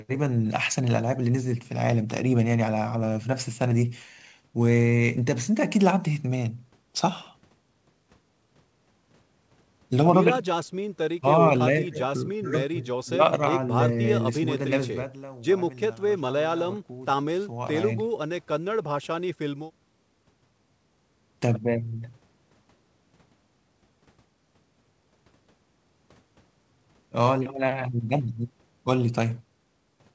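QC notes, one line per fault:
No faults found in this clip.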